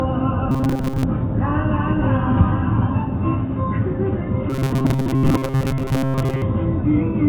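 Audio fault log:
0.51–1.04 s and 4.50–6.43 s: robotic sound from repeated short buffers. Audio likely arrived too slowly, so a segment of about 7.5 ms was looped for most of each stretch while real material was dropped. The loop imposes a rigid 133 Hz metallic buzz over the sound.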